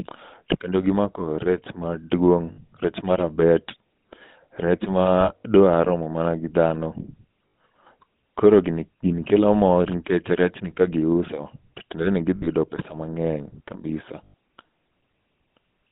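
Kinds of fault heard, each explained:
GSM full-rate codec: a 13 kbps vocal-tract model excited by sparse regular pulses gives the speech a buzzy, gravelly roughness throughout. On a spectrogram energy sits within roughly 150 Hz to 3.7 kHz, with nothing above, and harmonics look smeared and grainy.
Lost GSM frames: missing frames are filled by repeating the last good frame, heard as a brief metallic ring at 2.52, 5.2 to 5.43 (just before "romo mana gi dhano"), 7.48, 12.36 and 14.24 s. A waveform shows short repetitive stretches.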